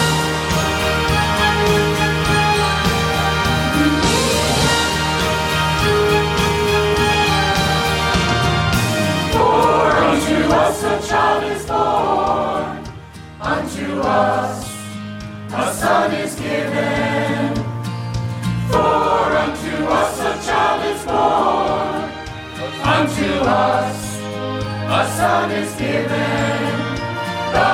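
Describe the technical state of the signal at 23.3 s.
At 23.3 s the signal is intact, with no audible dropout, distortion, glitch or other technical fault at that point.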